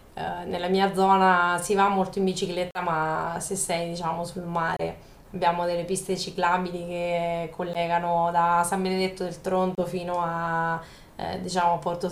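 The speech cuts to silence four times, at 2.71 to 2.81 s, 4.77 to 4.81 s, 7.73 to 7.78 s and 9.75 to 9.81 s, likely a Bluetooth dropout where late packets were discarded. Each shows as a sharp-edged blank vertical band on the spectrogram and a flat gap in the waveform, with speech resuming further along.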